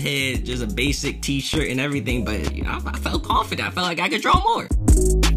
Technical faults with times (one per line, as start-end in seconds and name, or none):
1.54-1.57 loud pop
2.47-2.51 loud pop
4.34-4.38 loud pop